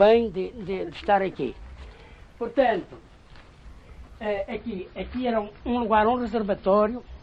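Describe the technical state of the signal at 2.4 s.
At 2.4 s the signal is intact, with no audible dropout, distortion, clipping, glitch or other technical fault.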